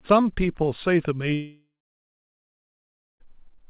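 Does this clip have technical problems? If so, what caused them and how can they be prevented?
Yes. A long network dropout runs from 1.34 to 3.22 s: the sound stops arriving, the receiver stretches the last moment into a fading buzz, then about 1.5 s of silence follows before the sound resumes with the lost stretch gone, likely from packet loss. More stable network capacity and redundancy or retransmission for lost packets would prevent it.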